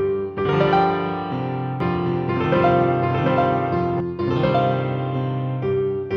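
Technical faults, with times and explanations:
1.80–4.00 s, doubled audio track: a second, full-band copy of the sound runs about 0.7 s behind the original at much the same level, likely from the signal being captured again by a slower path or from two out-of-step copies left in an edit. It cuts in and out abruptly, with no decay or room colour. On a waveform the envelope shows each event repeated; a spectrogram shows every pattern duplicated and shifted right.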